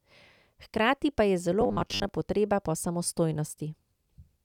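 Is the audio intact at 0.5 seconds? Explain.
Yes, at 0.5 seconds the speech plays through cleanly, with no dropout, click, distortion or other audible fault at that moment.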